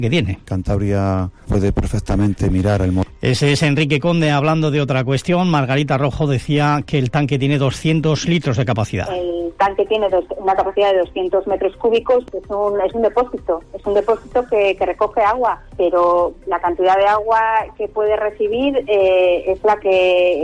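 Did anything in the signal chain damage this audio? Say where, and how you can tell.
No, nothing in the signal chain damaged this audio.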